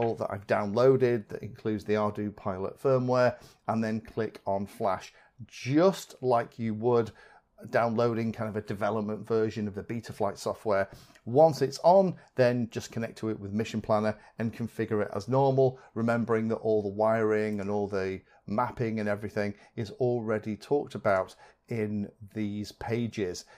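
Nothing in the audio stood out as a problem on listening.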